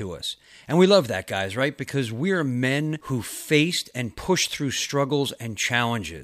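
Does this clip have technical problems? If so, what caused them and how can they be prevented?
No, the speech signal shows no technical faults at any point, so there is nothing here that calls for prevention.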